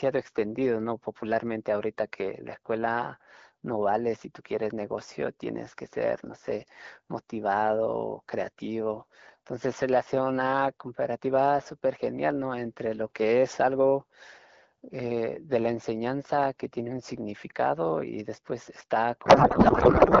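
At 19.25 s, a codec payload misread sets in and runs to the end of the clip. The speech is replaced by garbled noise and warble that barely tracks it. The two ends of the link disagree on how the AMR-WB bits are packed: octet-aligned frames are being parsed as bandwidth-efficient ones, so every field is read from the wrong offset. Before this, the wideband speech sounds clear, which fits the 12.65 kbit/s mode.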